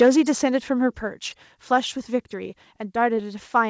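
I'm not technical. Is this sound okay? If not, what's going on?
No, not quite. Right at the very start, from about 0.01 to 0.09 s, the sound has a harsh, crackly edge. That's most likely microphone overload: the mic was set so loud that the tops of the loudest moments got sliced off, and you hear the flattened peaks as grit. Only a small share of that opening stretch is affected, and it's short.

Almost at the same moment, around 0.02 s, everything drops in volume in one sudden step. That's most likely the microphone volume stepped down: the call software noticed the mic was too hot and turned its input level down on the spot. That's why the level jump sits right on top of the crackly start.

The call connection itself is working normally. It just carries nothing above about 8 kHz, so the sound is a little less crisp than the original.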